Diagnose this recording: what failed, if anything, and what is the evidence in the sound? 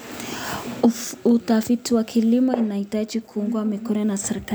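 At 3.96 s the speech jumps forward. There is no silence. A few milliseconds of sound are simply missing. The likely cause is a dropped buffer (overrun) at the driver or buffer stage. The hardware overwrote samples before the program collected them, so the two sides joined directly.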